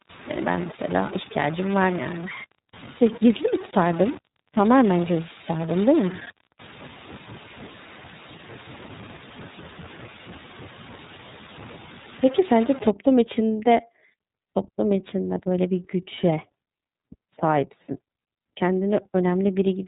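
A stuck bit affects this speech clip from the start to 12.90 s. Distortion rides on the voice, and the pauses fill with noise instead of falling quiet. The likely cause is one data bit held at a fixed value by a faulty line or converter, so roughly half the samples are shifted by that bit's weight, and because that bit's correct value changes with the sign of small values, quiet stretches fill with noise. The iLBC codec colours the whole clip, and its damage is plainly audible. Nothing above 3.8 kHz survives, giving a narrow, telephone-like sound. Because each frame's excitation is coded independently, the speech comes out slightly rough and synthetic, and the frame structure and texture point to iLBC's 30 ms mode at 13.33 kbps.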